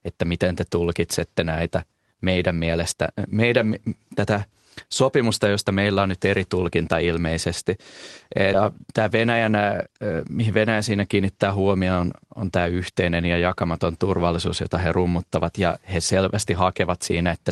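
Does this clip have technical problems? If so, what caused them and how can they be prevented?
Yes. At 8.53 s the speech has a skip ahead. Roughly 0.4 s of audio is gone. It was dropped, either on the way or by the jitter buffer when it overflowed, while later audio was already queued. Playback jumps straight on, with no gap filled. Prevent this by giving the jitter buffer enough headroom for bursty packet arrival.

From 8.63 to 9.95 s a jitter buffer speed-up follows. The buffer still held more audio than its target. The receiver trimmed short pitch-period pieces over and over, removing about 150 ms in total. The speech runs at 110% speed at unchanged pitch, so it sounds hurried. Prevent this by stabilising network delay so late packets stop arriving in bunches.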